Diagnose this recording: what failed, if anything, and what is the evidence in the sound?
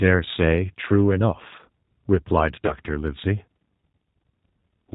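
Codec stage, G.729 codec: throughout, nothing above 4 kHz and a rough, synthetic sound, which fits an 8 kbit/s pulse-coded speech codec rather than plain band-limiting.

Network stage, VoIP packet loss concealed by the speech codec: from 2.66 to 2.75 s the sound is stretched and fades, which fits two lost 10 ms frames. The decoder extrapolated rather than leaving silent gaps.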